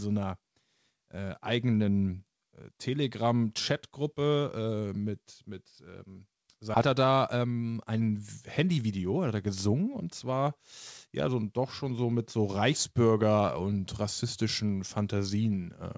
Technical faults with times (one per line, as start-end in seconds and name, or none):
6.74-6.76 skip ahead
6.86-8.23 jitter buffer speed-up
8.63-10.46 jitter buffer speed-up
11.07-12.20 jitter buffer speed-up